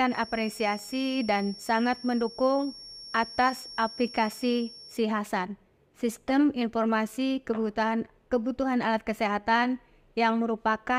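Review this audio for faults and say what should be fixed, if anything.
A loudspeaker-to-microphone loop was likely sitting right at the edge of feedback. Its gain was high enough to sustain one frequency but not to let it run away into a howl. The result is a feedback whistle: a thin, steady tone near 5.5 kHz, roughly 20 dB below the main sound and swelling and fading slowly in level, from the very start of the clip until 5.05 s. To prevent it, reduce loop gain with a narrow notch around 5.5 kHz or move the microphone out of the loudspeaker's coverage.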